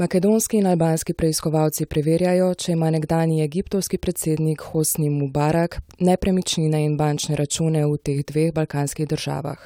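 No audible faults turn up anywhere in the recording; the speech runs without interruption, level jumps, or added noise.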